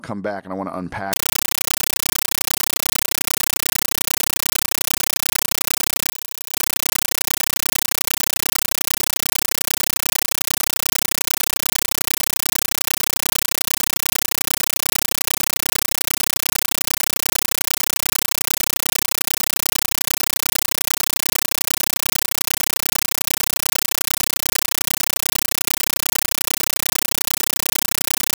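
At 1.13 s, right after "and I want to", the speech gives way to a compressed stream played as audio for the rest of the clip. Encoded data, which points to an AC-3 stream, reached the output as if it were ordinary samples. It sounds like loud, chattering static. The waveform shows bursts about 9.3 ms long separated by flat silence, repeating at 31.25 Hz. On a spectrogram these appear as broadband vertical stripes.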